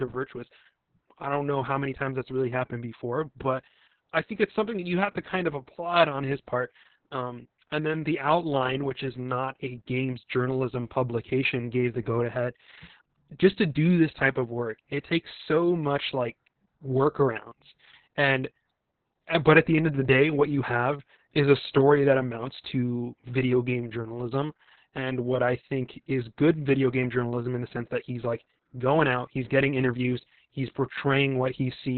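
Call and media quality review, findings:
Opus voice compression, whole clip: muffled, hoarse, a bit robotic, nothing above 4.3 kHz. Narrowband SILK mode, fits roughly 6 kbps, excitation coded coarsely.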